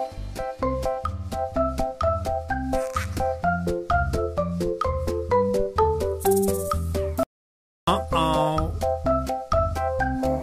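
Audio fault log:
7.23–7.88 s, audio dropout to silence: the sound cuts off abruptly mid-flow and returns just as suddenly about 0.64 s later, with no room tone in between, so whatever sounded in that span is lost. The likely cause is the input briefly failing, through a disconnect, link fault or mute, while recording carried on writing silence. The waveform shows a flat line, and the spectrogram shows a dark vertical band.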